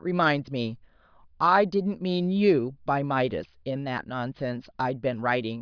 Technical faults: none

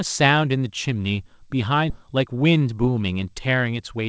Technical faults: skip ahead; jitter buffer speed-up

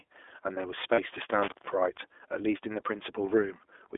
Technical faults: iLBC codec; lost iLBC frames; intermittent contact

